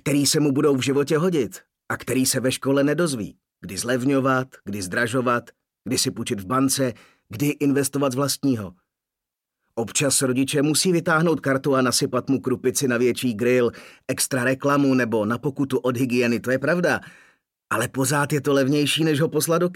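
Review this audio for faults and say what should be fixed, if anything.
Nothing in this recording needs fixing; no technical faults can be heard anywhere in it. No repair or preventive change is called for.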